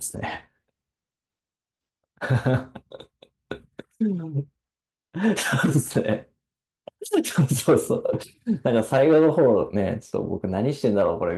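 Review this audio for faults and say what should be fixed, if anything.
Nothing stood out on listening to this speech recording, so there is nothing here that needs fixing.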